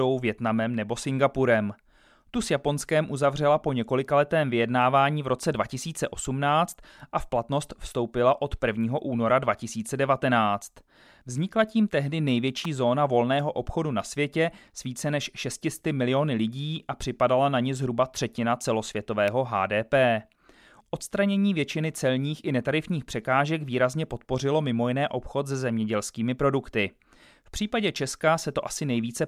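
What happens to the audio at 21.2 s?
Nothing goes wrong at 21.2 s; the speech plays through that moment intact, with no audible fault.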